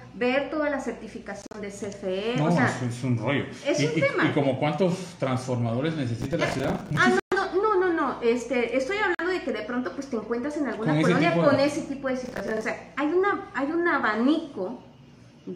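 Bluetooth dropouts occur at 1.42 to 1.56 s, 7.20 to 7.34 s and 9.15 to 9.23 s. Each is a silence, most likely from wireless packets reaching the headphones too late and being discarded. The sound then resumes further on, as though it had kept playing. The first is broken up, with about 76 ms missing across roughly 122 ms and the longest gap 46 ms. The second loses 122 ms, and the third is 46 ms.

Processor overload crackle appears at 6.22 to 6.97 s and again at 12.25 to 12.63 s. The processor repeatedly misses its deadlines for short buffers of around 10 ms, a few dozen in the first burst and fewer in the second. Each miss replays a scrap of old audio with sharp edges, so the sound takes on a gritty, tearing crackle that stops when the load eases.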